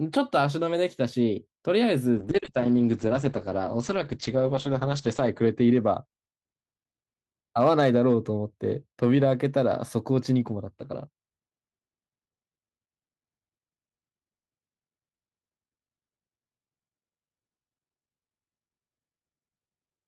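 From 2.21 s to 6.67 s the speech suffers a call bitrate drop. The encoder's rate falls from 40 kbps to 9 kbps and stays at its lowest for about 2.9 s. At that rate it codes each frame far more coarsely. It also narrows the audio band from 20 kHz to 8 kHz. The sound turns muffled and rough, with a watery edge. Clarity returns as the bitrate recovers.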